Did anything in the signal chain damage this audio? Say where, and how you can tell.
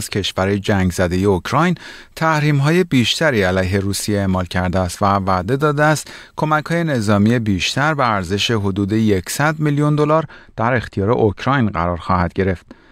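Yes. From about 10.11 s to the end at 12.91 s the speech goes dull and muffled, with a smooth treble roll-off around 13 dB down at 10 kHz relative to 1 kHz. That's de-emphasis applied wrongly in playback, cutting treble that was either never pre-emphasised or already de-emphasised once.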